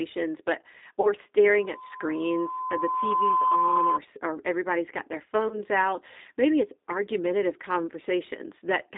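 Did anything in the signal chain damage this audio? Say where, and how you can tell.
Yes. The G.729 codec, at the codec stage, affects the whole speech clip: the band runs only from 250 Hz to 3.7 kHz, and the voice has a rough, synthetic edge, consistent with 8 kbit/s G.729A. The sound is rebuilt from a vocal tract filter, a pitch predictor and a few pulses per frame instead of the actual waveform.

VoIP packet loss concealed by the speech codec, at the network stage, shows up at 1.01 to 1.13 s and at 5.48 to 5.63 s, just after "or everybody's got their". About 30 ms of audio went missing each time, which fits one lost packet. The decoder extended its last pitch and filter while lowering the gain, and the sound stayed weakened for some time after packets resumed.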